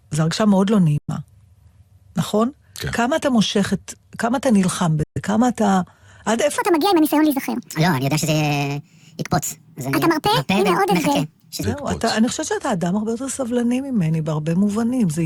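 Bluetooth dropouts at 0.98–1.10 s and 5.03–5.18 s cut this speech recording to sudden silence for 107 ms and 128 ms, likely from late packets dropped on the wireless link before the speech resumes further on. A section at the wrong speed runs from 6.58 to 11.63 s, playing 1.62 times too fast, so the speech sounds hurried and about seven semitones higher, likely from being played against the wrong clock.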